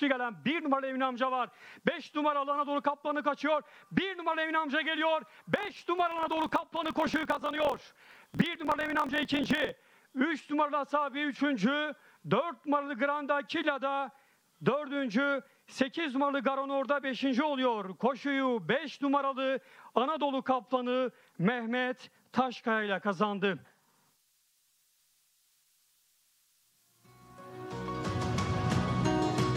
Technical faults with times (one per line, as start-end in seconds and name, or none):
5.51-9.73 block size mismatch (truncated)